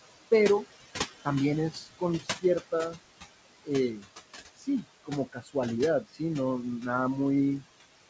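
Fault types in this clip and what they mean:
Noise suppressor artifacts: background pulled down about 17 dB throughout, sinking between phrases and rising under speech; spectrogram shows fluttering, patchy noise floor.
Speech cut by the noise suppressor: quiet speech treated as noise and dropped up to about 22 dB, near 1.7–3.0, 3.6–4.1, 4.5–5.6 and 6.0–6.2 s; spectrogram shows gaps in speech energy.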